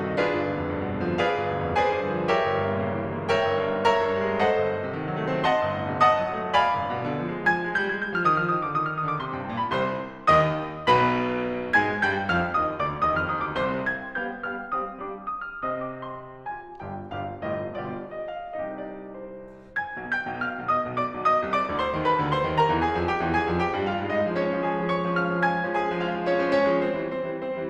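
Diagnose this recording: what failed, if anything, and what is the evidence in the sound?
Nothing here points to a failure at any stage, as the music runs along without a click, dropout or glitch anywhere to trace back to the wiring, converter, buffer, codec, network or playback.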